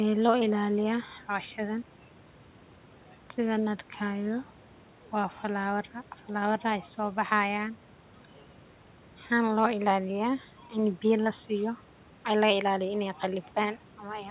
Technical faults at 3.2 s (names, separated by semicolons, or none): none